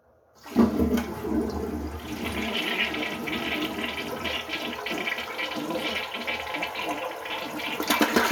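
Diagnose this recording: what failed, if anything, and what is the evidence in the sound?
Nothing failed in this recording, and the sound gives no evidence of any fault.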